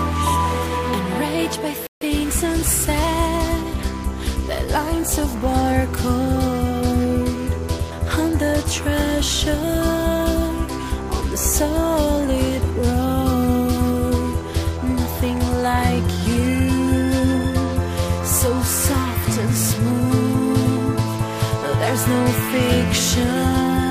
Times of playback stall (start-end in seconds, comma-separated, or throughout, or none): 1.87-2.01